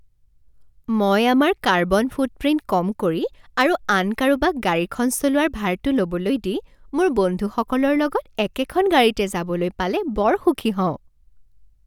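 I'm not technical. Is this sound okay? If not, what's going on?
Yes, this sound is okay. There are no technical problems to point to anywhere in the recording.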